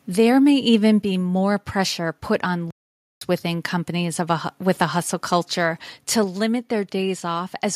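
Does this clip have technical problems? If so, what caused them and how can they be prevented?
Yes. From 0.73 to 0.89 s there is microphone overload: peaks exceed the converter's limit by about 1 dB, and a small fraction of samples are flattened, giving a harsh crackle. The likely cause is input gain set too high. Lowering the microphone input level to leave headroom prevents it.

The microphone volume is stepped down at 1.02 s by about 4 dB and again at 6.24 s by about 3 dB. Voice and background drop together, likely from call software automatically reducing device gain after loud peaks. Disabling automatic input-gain adjustment and setting a fixed level prevents it.

A playback stall runs from 2.71 to 3.21 s. The audio goes silent for about 0.51 s mid-flow and then resumes, likely because the player's buffer ran empty or its thread was blocked. Larger playback buffering and reduced system load prevent it.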